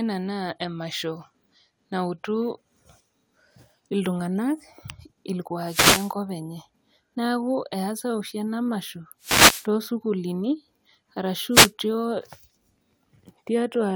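Wireless microphone noise hits interrupt this speech recording at 5.65–6.14 s, 9.21–9.69 s and 11.50–11.72 s, each a brief swish of static as the FM radio signal fades through reflection cancellation and receiver noise rises.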